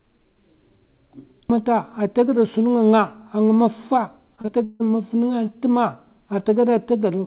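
From 4.36 to 4.82 s the speech breaks up with repeated packet loss, heard as a choppy stretch. Four separate holes open in under half a second, the longest about 158 ms, and each is patched by stretching the preceding sound, so nearly half the span is synthetic repetition. A single packet loss would leave one brief smear; here the patches recur in quick succession, heard against the narrowband sound with nothing above 4 kHz.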